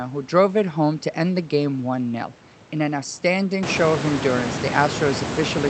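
The speech carries no technical faults: the room's background noise, part of the recording itself, climbs by about 22 dB at roughly three and a half seconds to sit about 8 dB below the voice, and the call-codec path shows the ordinary signature of Opus at a rate that fits around 40 kbps, with the top end rolled off above 8 kHz.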